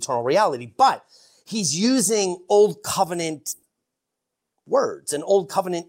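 At 3.51 s the speech hits a burst of packet loss lasting about 120 ms, until 3.65 s. The receiver covers the hole by stretching the last sound it had and fading it, so there is a held buzz or hiss rather than dead silence. That filled stretch, with no gap of true silence, and the way the speech picks up later than where it stopped, separate it from a plain dropout or a click.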